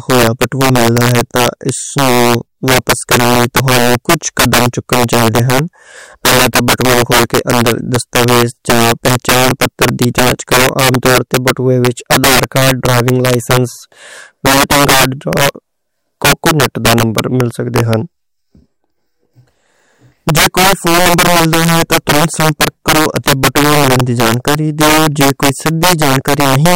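Integer overflow runs throughout the speech: gain about 11 dB too hot pushes a few percent of samples past full scale, wrapping to opposite sign as harsh cracks.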